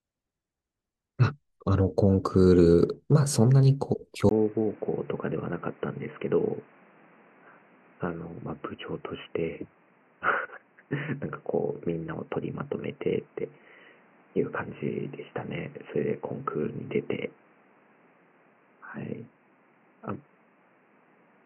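At 4.29 s the recording input was likely switched to a poorer device, and the speech stays on it through to the end. After a brief gap of about 20 ms, the sound turns dull and boxy, with nothing above 3 kHz, as if heard through a headset's call channel. The level drops a few decibels, and a new background noise sits underneath, roughly 30 dB below the speech.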